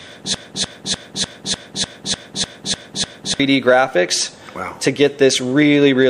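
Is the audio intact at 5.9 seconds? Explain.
Yes, the audio is intact at 5.9 seconds, with no dropout, click, distortion or other fault at that moment.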